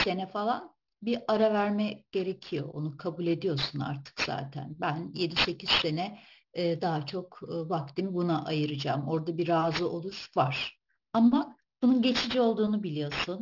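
Aliasing runs throughout this speech clip: content above a 6 kHz fold folds back as gritty, metallic sibilance, which fits a drop to roughly 12 kHz without an anti-aliasing filter.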